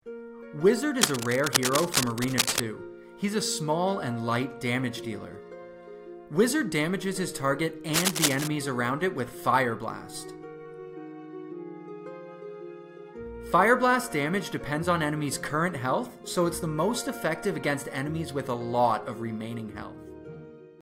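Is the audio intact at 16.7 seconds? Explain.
Yes, the audio at 16.7 seconds is intact, with no dropout, click, distortion or other fault at that moment.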